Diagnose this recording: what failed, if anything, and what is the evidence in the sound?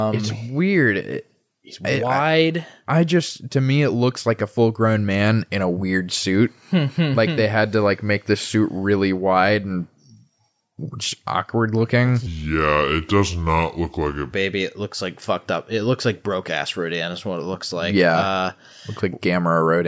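The failure is a wrong sample rate at the playback stage. From 12.26 to 14.33 s, just after "just awkward looking", the speech suddenly drops in pitch and slows down together. It runs at 0.726 times normal speed and sits about 5.6 semitones lower. Speed and pitch moving by the same ratio means the samples were clocked out slower than they were captured, with no rate conversion. That ratio fits audio recorded at about 22 kHz being played at 16 kHz.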